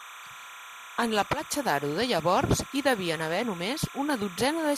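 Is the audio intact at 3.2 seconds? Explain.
No. At 3.2 seconds, as across the whole clip, timecode bleed sits under the speech. Linear timecode from an adjacent track or cable has leaked in. Its square wave flips between tones near 1 kHz and 2 kHz at a 30 frames-per-second code rate, roughly 15 dB below the speech. It sounds like a constant chirping warble. A spectrogram shows steady bands near 1 and 2 kHz with harmonics, and the waveform carries a fine, dense ripple even between phrases.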